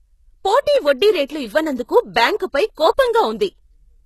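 From start to finish, the speech has a gritty, metallic treble, and s sounds come out lispy. Nothing sits above about 12.3 kHz, and the codec damage is plainly audible. This is likely HE-AAC compression at a very low bitrate, consistent with roughly 16 kbps. The codec spends its bits on the lower spectrum and then fills in the treble with copied, coarsely shaped lower bands, so the upper harmonics no longer line up with the real ones.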